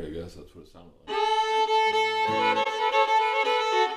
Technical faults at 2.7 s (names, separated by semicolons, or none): corrupt frame concealed